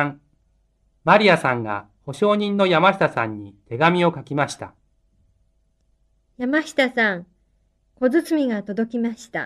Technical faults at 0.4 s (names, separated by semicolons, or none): none